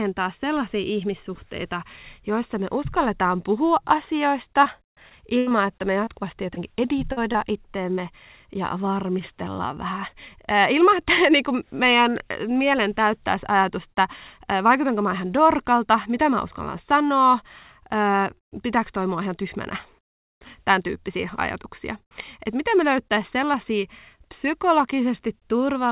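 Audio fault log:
4.64–5.53 s, repeated packet loss (robotic sound): five holes come in quick succession, about 160 ms missing in all, the longest about 82 ms. Each is patched by stretching the preceding sound, so the stretch turns choppy, with pieces missing, with about a sixth of it synthetic. What sets it apart from isolated dropouts is the density: the next gap arrives before the ear settles, so the repair itself becomes audible as choppy sound rather than a single blip.
6.05–6.09 s, 6.55–6.58 s, 7.12–7.18 s, 7.32–7.36 s, 7.96–7.99 s, short concealed packet loss: five separate holes, each about 20 ms except a 40 ms one at 7.12 s. The receiver bridges each by extending the last pitch or noise and blending back, heard as a brief smear or wobble, with a short consonant possibly gone. Unlike the robotic run, these are spaced out, over a band that stops near 4 kHz, which fits a 64 kbps G.711 call path.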